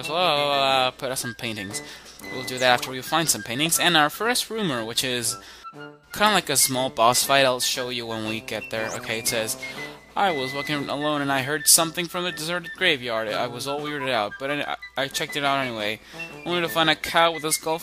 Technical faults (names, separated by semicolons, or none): none